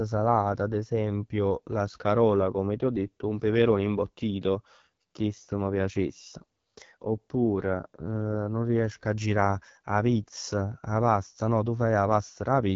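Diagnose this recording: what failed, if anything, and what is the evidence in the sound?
Codec: AMR wideband (HD Voice) throughout. The speech is raspy and stops near 7.5 kHz rather than narrowband's 3.4 kHz, and the roughness fits a low rate near 8.85 kbit/s.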